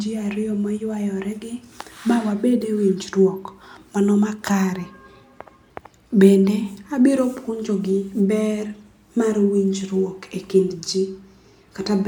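No technical faults turn up anywhere in this speech recording. There is nothing to mark at any point along its timeline.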